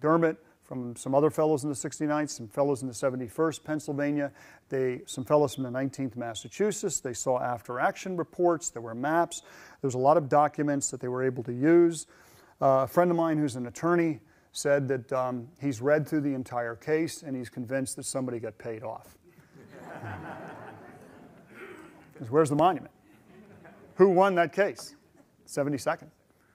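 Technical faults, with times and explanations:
22.59–22.61 s, loud pop: a brief voltage spike, likely from a switch or static discharge, adds one sharp pop about 5 dB above the sound, which carries on underneath.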